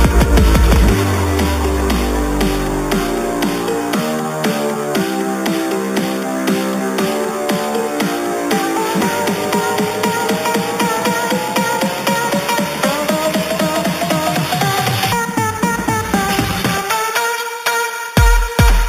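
Throughout the clip there is imaging from sample-and-hold upsampling, which points to an original 8 kHz rate held sample by sample up to 44.1 kHz without filtering. Mirrored spectra fill 4 to 8 kHz and above, about 14 dB down, as a metallic fizz tracking the sound.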